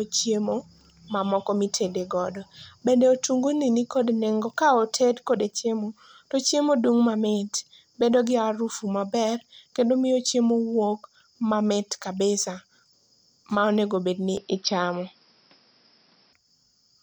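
Speech, with one fault. Just after "ma onegobedni", at 14.37 s, the sound turns dull and boxy. Nothing comes through above 5.7 kHz. The level shifts by a few decibels, and a faint new background noise appears well below the speech. There is no gap at the change. At 16.33 s the full, clearer sound returns. The likely cause is the input switched to a poorer device, a narrower-band microphone with its own tone and noise.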